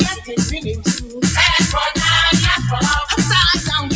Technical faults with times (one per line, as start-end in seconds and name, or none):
0.00-3.96 noise suppressor applied to music or sounds
0.14-0.33 sound cut by the noise suppressor
0.79-1.20 sound cut by the noise suppressor